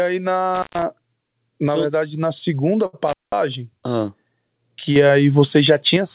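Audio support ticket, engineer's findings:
Dropouts with crackle at edges, 0.55–0.82 s (open 128 ms) and 3.08–3.32 s (open 195 ms). Intermittent contact: loose cable or plug opening briefly, faint hiss while open.

Sound held unnaturally long, 2.86–2.95 s, nothing lost. Short stall from a late packet: jitter buffer ran dry, last sound stretched 70 ms, playout delay up 70 ms.

Level and background noise step up together by about 6 dB, 4.96–5.97 s. Sudden gain jump, likely an unramped digital gain change.

Audio band-limited, nothing above 4 kHz, consistent with the G.711 mu-law call path.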